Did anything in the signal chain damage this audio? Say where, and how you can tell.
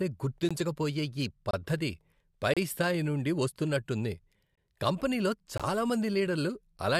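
Yes, at the streaming and playback stage: gaps between stream segments. Hard-edged silent holes land at 0.49, 1.51–1.54, 2.54–2.57, 3.57, 4.55–4.58 and 5.58–5.60 s. That's one per second, so the 1.0 s segments' timestamps don't quite meet and the player pads with silence. No audio is lost.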